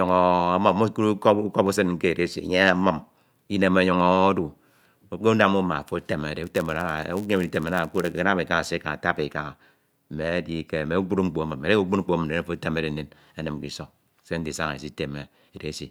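From 6.43 to 8.22 s there's a block size mismatch (padded) in the speech. One stage is handing over slightly shorter blocks than the next one reads, and the leftover space in each block gets filled with silence. Those tiny gaps recur 99.6 times a second, so you hear a steady buzz riding on the audio. The padding also stretches things out, so the stretch plays at 0.996 of normal speed while the timbre stays the same.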